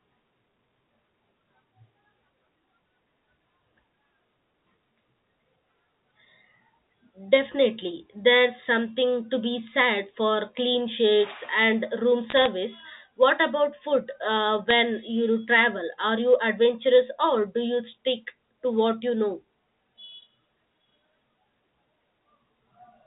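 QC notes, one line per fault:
12.30–12.47 s: bit errors on a digital phone line. A short burst of sharp ticks sits over the unchanged speech and sounds like crackle. Each flipped bit corrupts one A-law sample. When the sign bit or a high bit is hit, that sample jumps far from its neighbours and clicks.
14.70 s: bit errors on a digital phone line. This is a brief cluster of ticks. The same cause applies, with corrupted samples inside the narrow telephone band.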